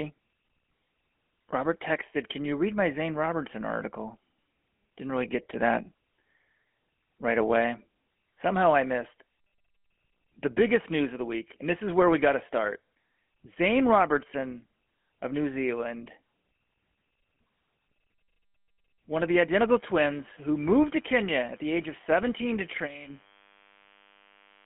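Speech with a gravelly, buzzy roughness the whole way through, as if the voice were pushed through a coarse grille, and a thin, narrow sound confined to roughly 200 Hz to 3.4 kHz. That is the GSM full-rate codec at work, and plainly audible here. It rebuilds the voice from a vocal-tract model fed by a sparse, regularly spaced pulse excitation, which fits the 13 kbps full-rate scheme, so fine detail is replaced by that rasping grain. From 19.73 s, right after "one of the", a steady, thin buzz starts and runs to the end at 24.66 s. It sits well below the speech, around 30 dB down. This is DECT cordless phone buzz. A nearby DECT handset or base transmits a short radio burst every 10 ms, and the audio circuitry rectifies it into a 100 Hz tone with a dense stack of harmonics.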